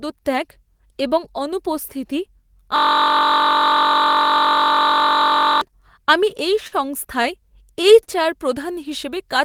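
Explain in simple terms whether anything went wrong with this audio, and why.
Two kinds of fault can be heard in this speech clip.

From 2.76 to 5.61 s there is a system hang loop. The computer or its audio driver froze, but the sound hardware kept replaying the same tiny stretch of its buffer. That stretch is only 21.33 ms long, which fits a 1024-sample buffer. It repeats about 47 times a second for nearly three seconds, so the speech gives way to a steady buzz.

Later there are three short stalls from a late packet. At 6.67 s, 7.22 s and 8.03 s, a piece of audio arrived late over the network. The receiver held the last sound until it came, for 43 ms, 17 ms and 39 ms. Nothing is lost. The speech simply hangs for a moment with a slight buzz or dip and then carries on.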